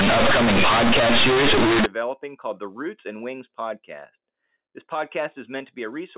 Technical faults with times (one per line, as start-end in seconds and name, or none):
0.00-1.86 companded audio read as linear